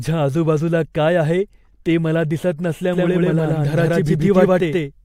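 A second, slower capture path or an out-of-step edit has likely mixed the speech in twice, producing a doubled audio track from 2.93 s to the end. A full-band copy, about as loud as the original, trails roughly 150 ms behind, cutting in abruptly with no decay or room colour.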